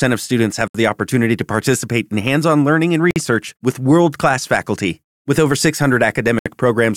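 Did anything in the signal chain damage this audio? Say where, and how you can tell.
Yes. The speech drops into short holes of silence three times: about 69 ms at 0.68 s, between "of students have" and "the opportunity to participate"; about 52 ms at 3.11 s, between "hands on learning and" and "with world class faculty"; and about 67 ms at 6.39 s. Each hole has smeared edges, and the speech resumes exactly where it stopped. This is a gap at a join of encoded pieces, caused at the codec stage. Separately encoded segments were concatenated with each encoder's start-up delay and final-frame padding left in place.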